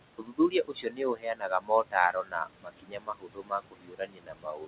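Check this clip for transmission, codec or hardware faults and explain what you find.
Two faults from the noise suppressor are audible in this speech: residual processing artefacts across the whole clip, and parts of the speech being pulled down along with the background.

Noise suppressor artifacts run from start to finish. The suppressor estimates the steady room noise and lowers each frequency band it judges to be noise by about 22 dB, frame by frame, so the background drops away in the gaps and swells back under the speech. On a spectrogram the noise floor appears blotchy and speckled, with isolated time-frequency cells flickering on and off instead of forming a smooth wash.

Speech cut by the noise suppressor occurs between 0.18 and 1.96 s, with about a second of that span affected, and again from 2.12 s to the end. In both spans the suppressor mistook quiet parts of the speech, such as soft consonants and trailing syllables, for noise and turned them down by up to about 22 dB. 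Those sounds come across as swallowed or faint. In the waveform, the tails of speech bursts collapse abruptly toward the floor, and on the spectrogram weak high-frequency consonant energy is missing or patchy. Above 4 kHz the spectrogram is empty, which fits a narrowband telephone codec on the call path.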